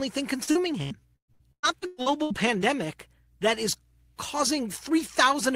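Repeated packet loss (robotic sound), 0.43 to 2.76 s: holes are patched by extending the preceding sound, leaving choppy speech with gaps up to 119 ms.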